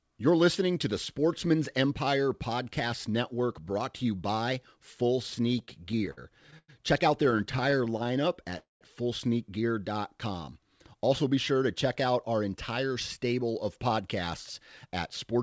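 From 5.52 to 6.70 s, packets reached the receiver late again and again, so the jitter buffer kept running dry: these are repeated stalls (stutter). It filled eleven short gaps, the longest 100 ms, with continued sound, about a fifth of the stretch, so the speech drags and judders without losing anything.

From 7.24 to 8.54 s the same stutter returns as seventeen much briefer stalls, none longer than 17 ms. They take up about an eighth of that span, giving a finer, rapid hiccup rather than obvious holds.

At 8.58 to 8.83 s there is a call audio freeze: the last sound is carried on and then drops to silence for around 140 ms of a roughly 230 ms gap before the speech resumes where it stopped. The likely cause is packets held up in transit, emptying the buffer and adding roughly 230 ms of delay.

From 9.93 to 10.65 s the buffer was short of reserve, so the receiver repeated small pitch-period pieces to stretch the audio. 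This jitter buffer slow-down adds 73 ms and runs the speech at about 91% speed at unchanged pitch, sounding slightly drawn out.

From 12.34 to 14.02 s the buffer held more than it wanted, so the receiver cut short pieces out, removing roughly 150 ms. This jitter buffer speed-up plays the speech at about 108% speed with the same pitch, making it sound a little hurried. Throughout, the G.722 call path at 64 kbps leaves nothing above 8 kHz.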